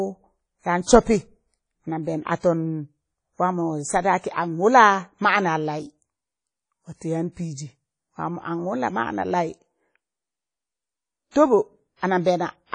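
From start to finish the speech carries plainly audible codec damage, most likely WMA compression at a low bitrate, something near 32 kbps. Nothing reaches above 10.1 kHz, so the top is dulled, and the transform blocks smear quantisation noise around each syllable, giving a ringing, washy edge and a hiss that swells and fades with the voice. A spectrogram shows a hard ceiling at 10.1 kHz with patchy, holed upper bands.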